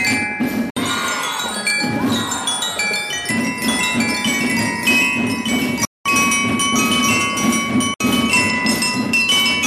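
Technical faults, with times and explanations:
0.70 to 0.77 s, 5.85 to 6.06 s and 7.94 to 8.00 s, Bluetooth dropout: the sound cuts out for about 61 ms, 203 ms and 61 ms, then picks up further along as if it kept playing underneath. This is likely packets not reaching the headphones in time and being dropped.
3.68 to 9.14 s, doubled audio track: a full-band second copy runs around a second behind the original and about 5 dB quieter, with no decay or room colour. It starts and stops abruptly. The likely cause is a second, slower capture path or an edit holding two out-of-step copies.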